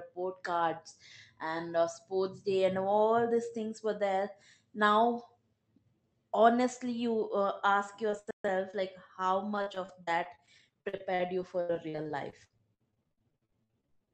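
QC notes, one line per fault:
8.10–14.11 s, repeated packet loss (robotic sound): 51 short gaps up to 101 ms, about a quarter of the span patched by stretching prior sound; spectrogram shows smeared, stuttering bands.
8.31–8.45 s, playback stall: sound halts for about 135 ms, likely the player running out of data; waveform shows a flat silent block, spectrogram a blank column.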